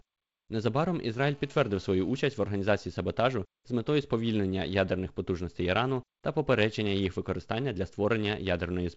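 From 1.17 to 2.20 s, a GSM phone buzz sits under the speech. A nearby 2G phone in a call sends radio bursts 217 times a second. The audio circuit rectifies them. This gives a steady, raspy 217 Hz buzz, about 32 dB down.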